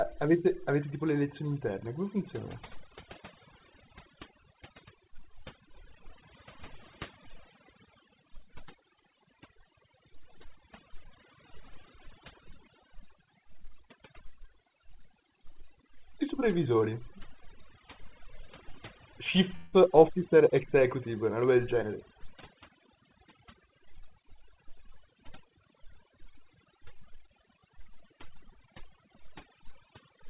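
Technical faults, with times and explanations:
Throughout: overdone noise removal. The pauses are near-silent and dotted by twinkling specks, because an over-aggressive noise reducer pulled bands near its noise estimate down or out. On a spectrogram the background is dark with isolated bright flecks, and the speech shows holes, all below the 4 kHz ceiling of the G.711 call path.
19.56 to 19.75 s: call audio freeze. For about 166 ms the last sound is stretched into a fading buzz or hiss rather than silence, and the speech then resumes where it stopped with nothing lost. The likely cause is packets held up until the jitter buffer emptied. The waveform shows a smooth decaying smear, and the spectrogram shows horizontal streaks repeating one frame.
21.60 to 23.33 s: jitter buffer speed-up. The speech runs at about 109% speed with unchanged pitch and sounds hurried, as the receiver cut roughly 150 ms of pitch-period slices to shrink excess buffering. 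The spectrogram shows harmonics at normal spacing but compressed syllable timing, and the waveform shows tiny splice points.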